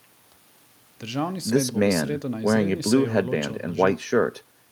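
No technical faults can be heard at any point in the speech.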